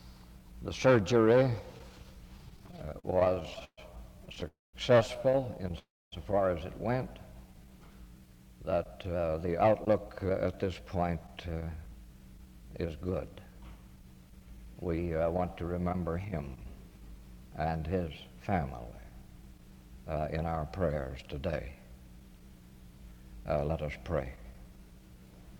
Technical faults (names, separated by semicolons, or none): repeated stalls (stutter); call audio freeze; jitter buffer speed-up